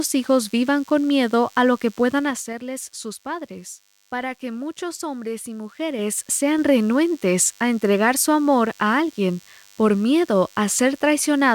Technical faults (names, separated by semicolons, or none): DECT cordless phone buzz; zipper noise